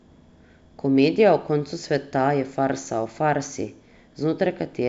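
Speech over G.722 wideband coding, with no faults heard.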